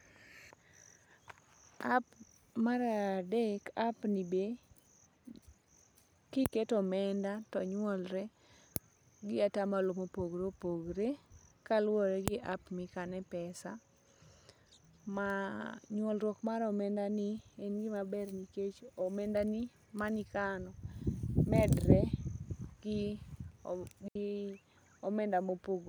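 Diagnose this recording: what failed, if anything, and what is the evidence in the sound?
At 24.08 s the speech drops into a clean hole of near silence for about 75 ms, with no noise burst either side: a digital wireless dropout, the receiver muting after losing the link's data.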